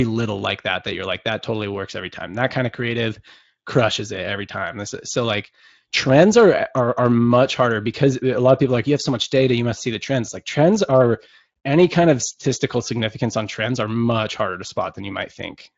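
Nothing stood out on listening to this speech, which passes through a Speex path whose content stops a little below 8 kHz.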